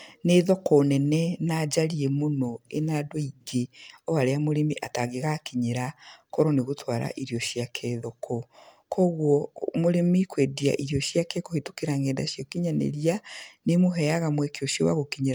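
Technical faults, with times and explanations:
Throughout, generation loss: the speech sounds swirly, smeared and hollow, with consonant attacks blurred and watery artefacts shifting through the spectrum. That damage is heavier than the full bandwidth, reaching about 20.1 kHz, would suggest. The likely cause is MP3 encoding repeated about four times at what sounds like around 130 kbit/s, each pass requantising on a shifted frame grid so noise and spectral holes pile up. A single low-bitrate encode would instead lose the top end.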